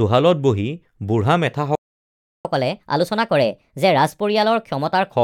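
The clip is speech, and it has a playback stall followed by catch-up at higher speed. At 1.75 s the sound cuts out in mid-flow. Silence holds until 2.45 s, a gap of about 0.69 s. The likely cause is that the player ran short of buffered data, or its audio thread was blocked, so nothing reached the output. When the sound returns at 2.45 s, it picks up where it stopped. From 2.45 s to 5.12 s the audio runs fast, at 1.25 times normal speed. The player is resampling its backlog to recover the lost time. Because it speeds up by resampling rather than time-stretching, the pitch rises with the speed, by about four semitones. The voice sounds hurried and raised for that stretch. It then drops back to normal speed and pitch.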